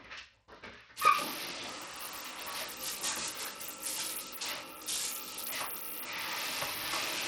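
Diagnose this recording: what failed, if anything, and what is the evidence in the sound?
Codec stage, throughout: treble flickers and drops out under gritty aliasing, likely Bluetooth SBC compression starving its top sub-bands, fitting about 80 kbps. A plain low-pass would cut steadily.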